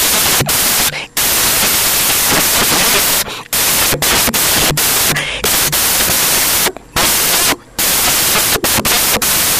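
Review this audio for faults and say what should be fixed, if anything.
Broadband noise covers the speech throughout: samples built from the wrong bytes, so each sample's fast-changing low bits became its large part. Prevent this by matching the reader's byte order, offset and alignment to the file's actual sample format.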